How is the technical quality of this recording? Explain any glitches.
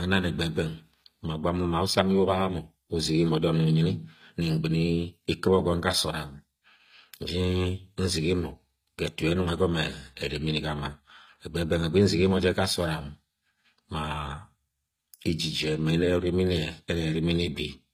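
Plainly audible codec damage runs through the whole recording. Throughout, s sounds are gritty and lispy, likely HE-AAC compression at roughly 24 kbps copying lower bands upward. A spectrogram shows blocky, mismatched treble stopping at 15.5 kHz.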